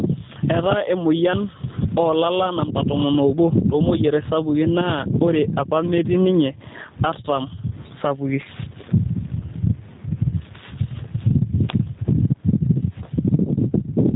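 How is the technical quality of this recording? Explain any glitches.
The recording has two faults that run through the whole clip: gain pumping and the plainly audible damage of a G.729 low-bitrate speech codec.

Gain pumping is present from start to finish. The gain swings by about 25 dB. The likely cause is an input gain set far too high for the microphone, with a fast limiter or compressor clamping the level on each loud syllable and releasing it in the gaps. The loud and quiet parts of the speech therefore sit close together in level, and the result sounds squashed.

G.729 codec artefacts are also audible across the entire clip. The speech is band-limited, with nothing above 4 kHz, so it sounds muffled and telephone-like. It is still intelligible but has a rough, slightly synthetic texture. This fits an 8 kbit/s codec that rebuilds the signal from a vocal-tract filter, a pitch predictor and a few pulses per frame instead of carrying the actual waveform. 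The call microphone processing's removal of the lowest bass sits underneath this and is not a fault.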